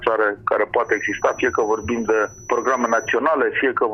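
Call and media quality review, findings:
Feedback whistle, 0.8–3.2 s: thin steady tone at 5.9 kHz, about 25 dB below the main signal, level swelling and fading slowly. Probable component: likely acoustic coupling from loudspeaker to microphone, loop sitting at the point of feedback so one frequency sustains without running away.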